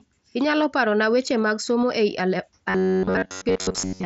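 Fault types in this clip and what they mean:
Robotic sound from repeated short buffers: From 2.70 s to the end, the speech turns into a rigid, metallic buzz near 94 Hz. Most of that stretch is repeats rather than new audio. The likely cause is a chunk of about 10.7 ms replayed while fresh audio arrives late.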